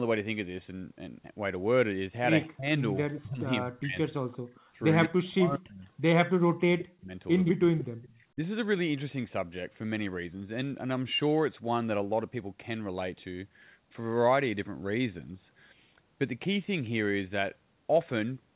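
From 2.45 to 4.24 s the speech dips repeatedly, roughly a second of it in total and by around 40 dB at its deepest. This is speech suppressed in double talk. The likely cause is an echo canceller that could not tell the local talker from loudspeaker echo while both were active, so it turned everything down. On a waveform the envelope caves in mid-phrase. On a spectrogram the harmonics fade or vanish in blocks.

From 4.32 to 5.07 s an echo leak appears. A delayed copy of the far-side voice returns about 166 ms behind it, roughly 10 dB below the speech. It likely comes from residual loudspeaker pickup that the canceller failed to remove and that was sent back. On a spectrogram it shows as a fainter, time-shifted duplicate of the harmonic pattern.

Inside that stretch, from 4.52 to 4.71 s, the room sound is background gated by the echo canceller. For about 150 ms it drops by about 31 dB as the canceller clamps the microphone, then it returns. 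The noise floor shows a sudden dark notch on a spectrogram and a flat, near-silent gap on the waveform.

Double-talk suppression returns from 5.07 to 7.77 s, cutting about 1.5 s of speech by around 40 dB at worst. Overlapping it, a brief echo leak at 6.78 to 6.85 s sits about 15 dB down, and a longer one from 7.45 to 8.16 s sits about 10 dB down. Both arrive at the same 166 ms delay.

A last short suppression at 8.35 to 8.39 s dips the speech by around 15 dB. Throughout, the call path's G.711 A-law coding leaves nothing above 4 kHz, a hard ceiling across the spectrogram.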